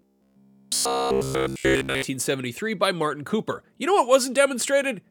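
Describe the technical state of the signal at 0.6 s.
At 0.6 s you're inside the robotic sound from repeated short buffers, 0.02 to 2.02 s: likely a roughly 15 ms buffer looping, giving a rigid 66.8 Hz metallic buzz.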